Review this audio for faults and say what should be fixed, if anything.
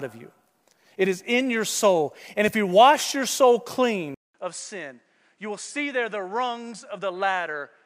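At 4.14 s the speech drops out for 200 ms, then comes back about 10 dB quieter, with nothing above 10.5 kHz and fresh background noise roughly 40 dB under it, right to the end. That's likely the input switched to a poorer device mid-take. Pin the input device in the recording settings so the system can't swap it during a session.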